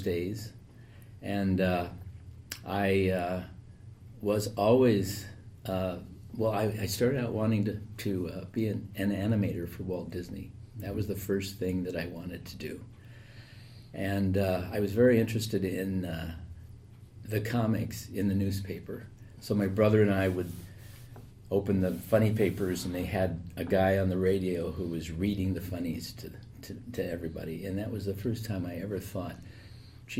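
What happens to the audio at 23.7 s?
Nothing goes wrong at 23.7 s; the audio plays through that moment intact, with no dropout, click, distortion or other fault.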